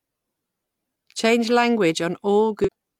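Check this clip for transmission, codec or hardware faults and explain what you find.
One fault is audible near the end of the speech, from 2.62 to 2.69 s: damaged data in a compressed stream. Part of the encoded stream arrived corrupted, with bytes lost, zeroed or overwritten, so the decoder could not interpret those frames correctly. It lost its place in the stream and had to hunt for the next valid frame header before it could decode normally again. For those 64 ms the speech gives way to a short synthetic chirp or blip.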